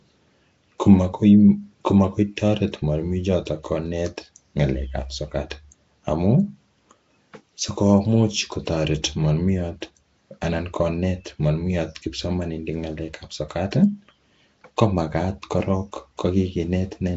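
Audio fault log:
throughout Nellymoser compression: speech sounds rough, hissy and underwater, likely from the old Flash microphone codec. The spectrogram shows noise-filled, patchy bands and nothing above 7.8 kHz.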